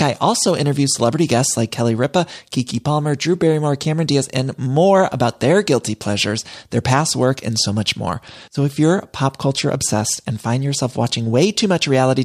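No technical faults are audible.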